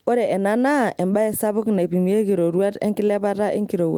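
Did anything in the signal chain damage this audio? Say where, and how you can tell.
No, nothing in the signal chain damaged this recording.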